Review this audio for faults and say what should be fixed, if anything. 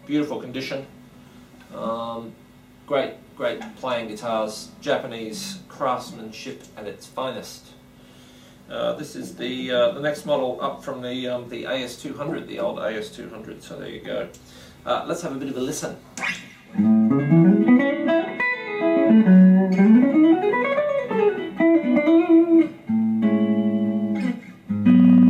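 Nothing stood out on listening, so there is nothing here that needs fixing.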